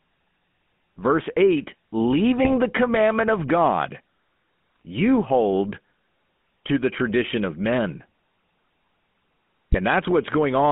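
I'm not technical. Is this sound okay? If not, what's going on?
No. The whole clip went through the GSM full-rate codec, the old mobile-phone speech compressor, so the speech sounds thin and buzzy and gravelly, not just muffled like a narrow phone line.

On top of that, GSM bit errors, corrupted data on a weak mobile link, cause brief squawks and gargling at 2.44 to 2.53 s (just before "the commandment of"), 4.76 to 4.80 s (before "you hold") and 9.72 to 9.77 s. These are garbled blurts, not silent dropouts.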